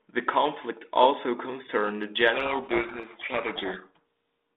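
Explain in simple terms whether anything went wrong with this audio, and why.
Something goes wrong from 2.34 to 4.0 s, right after "conflict also concerned the": a codec payload misread. The receiving end takes the G.726 code words in the wrong bit order, so it decodes the right amount of data with every value scrambled, and the speech drowns in harsh, grinding distortion. A dropout would go silent. Ordinary G.726 hiss, audible only faintly elsewhere, stays mild and follows the speech. This stays harsh throughout and then snaps back to clean.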